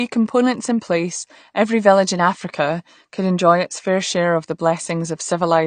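AAC compression runs from start to finish of this speech clip. Nothing remains above 9 kHz, so the top octave is gone and the sound is dull, and the coding damage is plainly audible throughout. The likely cause is an AAC encoder starved of bits, which fits a setting around 32 kbps. With so few bits per frame, the encoder drops the highest frequency lines entirely and quantises what remains coarsely against its hearing model, and that coarse quantisation is what carries the audible damage.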